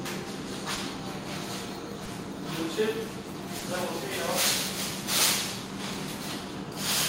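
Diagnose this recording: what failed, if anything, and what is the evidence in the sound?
Short concealed packet loss at the network stage: brief smears near 0.75–0.79 s, 2.05–2.09 s and 3.59–3.63 s, each about 20 ms of audio missing and replaced by decoder concealment. Unlike a plain dropout, there is no silent hole; the preceding sound is extended and blended back.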